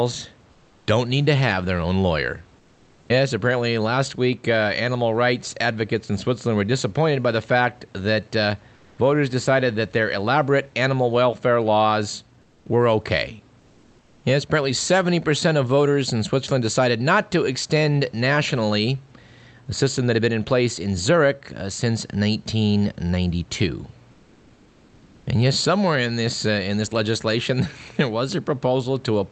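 During six pauses, at 0.51–0.87 s (just before "don't need to have"), 2.59–3.09 s, 8.75–8.97 s (between "the fact that uh" and "voters decided that their"), 12.41–12.65 s, 13.59–14.23 s (after "welfare laws were okay") and 24.11–25.25 s, the faint room background, sitting about 32 to 36 dB below the loud parts, flattens into a smooth, featureless hiss about 1 to 4 dB quieter. This is comfort noise in place of the background, likely from Opus discontinuous transmission synthesising noise while the sender sends only occasional updates.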